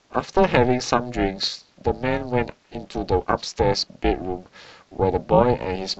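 From start to finish the speech carries a heavy overlap-add ripple: the frames were windowed and summed back with an overlap that doesn't add up to a flat gain, so the level dips by about 60 dB around 400 times a second, giving a harsh metallic buzz with extra tones around each note.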